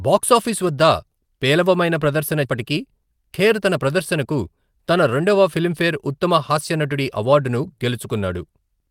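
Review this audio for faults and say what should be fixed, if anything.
A skip ahead occurs at 2.45 s, right after "బాక్సాఫీస్ వద్ద పేలవమైన ప్రదర్శన". About 0.4 s of speech was discarded, and the two sides join directly. A larger jitter buffer would prevent it.

A jitter buffer speed-up runs from 2.55 to 5.24 s, ending before "ఫిలింఫేర్ ఉత్తమ హాస్య నటుడి". Short pitch-period pieces were cut repeatedly, so speech runs 8% faster and sounds hurried. Draining the buffer more gently would prevent it.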